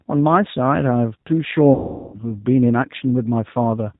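Across the whole speech clip the G.729 codec is plainly audible: the band stops at 4 kHz, and the voice has a rough, slightly synthetic edge, consistent with an 8 kbit/s G.729A stream. The codec rebuilds each 10 ms frame from a vocal tract filter, a pitch predictor and a few pulses rather than sending the waveform, so fine detail and air above 4 kHz are simply absent.

From 1.74 s to 2.19 s, VoIP packet loss concealed by the speech codec takes over. With packets missing, the decoder keeps extending its last pitch and filter settings at falling gain, so the sound smears into a stretched, fading tone or noise instead of cutting to silence. The gap points to roughly 390 ms of lost audio. Because each frame depends on the previous one, the voice stays weakened and distorted briefly after packets resume.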